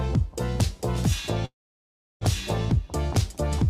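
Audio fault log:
1.45–2.23 s, call audio freeze: the sound gives way to a brief fading buzz, then about 0.7 s of silence, and resumes at 2.23 s exactly where it left off, so nothing is skipped but everything after arrives about 0.76 s late. The likely cause is delayed packets draining the receiver's jitter buffer, after which the receiver stretched the last audio into a decaying tail and waited, inserting roughly 760 ms of filler rather than dropping material.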